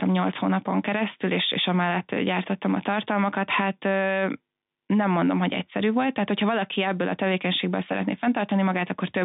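No technical faults are audible.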